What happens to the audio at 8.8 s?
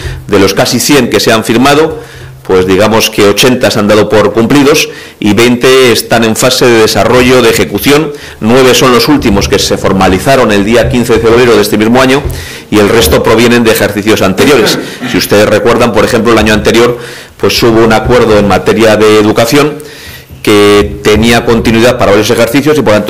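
At 8.8 s, as throughout, loud sound turns into harsh, constant fuzz: hard clipping, with the signal driven about 19 dB too hot, so nearly a third of samples are cut flat.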